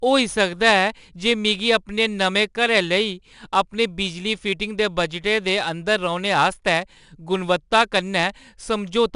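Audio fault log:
throughout 4-bit ADPCM compression: gritty hiss rides on every loud stretch of speech, sharp attacks sound rough, and nothing is heard above 10.6 kHz. Each sample is a coarse 4-bit step from a prediction, so the noise follows the level; this fits roughly 89 kbps.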